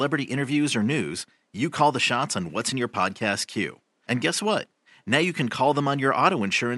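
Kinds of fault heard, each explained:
No faults can be heard in this speech clip. There is a faint room noise under the speech, about 49 dB below it, which belongs to the recording space and not to the system.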